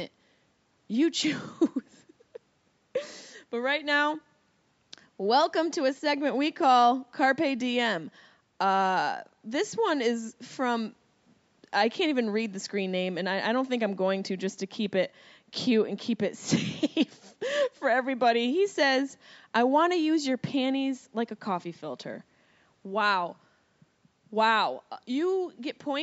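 No technical faults are audible in this speech.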